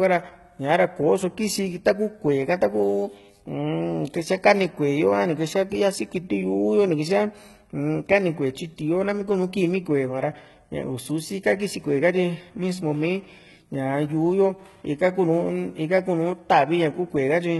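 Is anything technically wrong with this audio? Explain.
Yes. The speech carries heavy codec damage for its whole length. Nothing is present above about 11.8 kHz. The treble below that limit does not sound like the original. The likely cause is HE-AAC compression at a very low rate, which fits something near 16 kbps. The codec keeps only the lower spectrum. It rebuilds the highs by copying lower bands upward under a coarse envelope. The rebuilt harmonics do not line up with the real ones, so s sounds turn gritty, metallic or lispy.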